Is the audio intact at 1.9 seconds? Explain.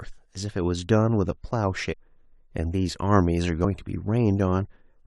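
No. Between 1.92 and 1.94 s the audio shows compressed frames skipped: a run of encoded frames was missing or rejected by the decoder as damaged, so it was never played. The speech jumps forward by roughly 200 ms of material, which fits around seven frames of about 23 ms each. At the join the speech breaks off and resumes abruptly further on.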